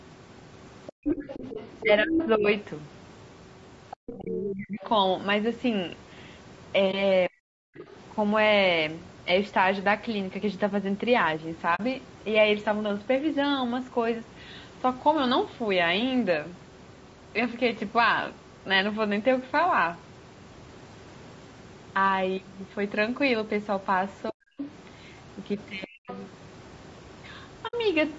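Throughout, the sound is rough and grainy, with noise between the harmonics, a sign of low-delay AAC compression, likely AAC-ELD at around 32 kbps. The call microphone processing leaves nothing above 8 kHz.

From 0.87 to 4.88 s the other side's voice leaks through, nearly as loud as the talker. This is likely an echo canceller failing to remove the far end from the microphone.

From 0.92 to 1.05 s the background is gated by the echo canceller. Room sound drops by about 40 dB for roughly 150 ms.

From 1.26 to 2.48 s and 4.13 to 4.84 s comes speech suppressed in double talk, likely the canceller ducking the talker deeply while both sides speak. It happens again from 7.28 to 7.52 s, nearly muting the talker.

At 6.91 to 6.94 s there is AAC frame loss with muting, a 20 ms hole that fades out and in, which fits one lost frame.

A faint scrap of the other side leaks through at 7.77 to 7.84 s.

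A 40 ms muted gap follows at 11.75 to 11.80 s.

From 24.31 to 26.1 s suppression returns while the leaking far-end voice runs from 24.58 to 26.22 s.

A 60 ms soft-edged dropout comes at 27.67 to 27.74 s.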